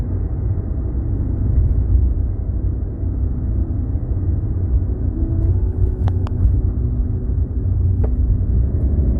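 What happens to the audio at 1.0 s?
Nothing goes wrong at 1.0 s; the everyday sound carries on intact through that moment with no audible fault.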